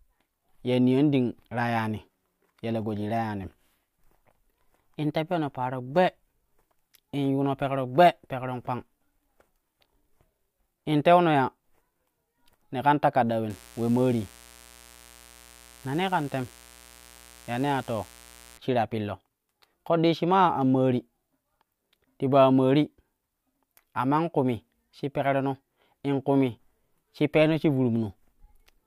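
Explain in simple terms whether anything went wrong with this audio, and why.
Something went wrong from 13.5 to 18.58 seconds. A mains buzz sits under the speech there. Electrical interference from the 60 Hz power supply leaked into the recording. It adds a steady, raspy hum. It is quieter than the speech.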